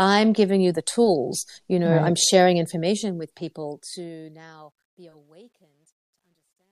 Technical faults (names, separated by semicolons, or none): truncation distortion on a fade